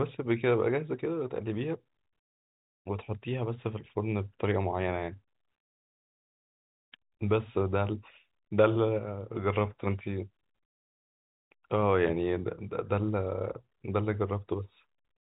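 Nothing here goes wrong at any point; the speech comes through G.711 telephone coding as you'd expect, so the top end stops at around 3.8 kHz and everything arrives with that familiar phone-line narrowness.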